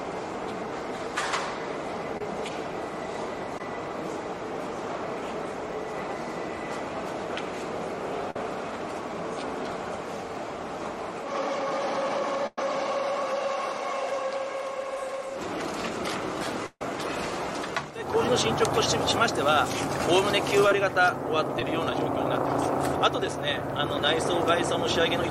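The audio has short concealed packet loss at 2.17–2.21, 3.58–3.61, 20.69–20.72 and 21.6 s, where roughly 10–20 ms went missing and was patched with a brief smear or wobble. A burst of packet loss at 8.31–8.36, 12.47–12.58 and 16.66–16.82 s is longer, 40–150 ms, heard as a held buzz or fading hiss that skips ahead, with near-silence in the longest two.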